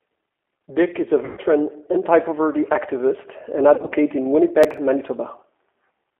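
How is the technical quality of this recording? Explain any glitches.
The recording has plainly audible low-bitrate telephony coding throughout, two stretches of concealed packet loss, and one brief burst of processing crackle.

G.729 codec (throughout): The speech sits in a narrow line band of roughly 250 Hz to 3.4 kHz at 8 kbit/s. The decoder rebuilds each frame from a vocal tract model and a few pulses, which gives a rough, slightly synthetic texture. That texture sets it apart from simple band-limiting, which would sound muffled but clean.

VoIP packet loss concealed by the speech codec (1.25 to 1.40 s, and 3.75 to 3.93 s): In the first event about 120 ms of audio is missing in one run. The decoder extends its last pitch and filter, so the sound smears into a buzzy, fading tone. The second event loses about 90 ms scattered over 160 ms, with no run longer than 30 ms, so it sounds like a wobbling, intermittent smear. 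Because the gaps are filled smoothly rather than left hard-edged, this is not a dropout.

Processor overload crackle (4.64 to 4.78 s): About five small buffers, which fits buffers of about 5 ms, were not processed in time and were skipped. Each skip leaves a hard-edged gap, and together they produce a gritty tearing crackle. Unlike concealment, there is no tonal smoothing, and the sound snaps back cleanly once the load passes.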